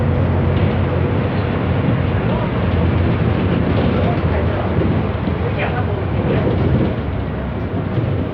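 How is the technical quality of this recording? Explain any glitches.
The technical quality of the recording is sound, with no glitches to explain.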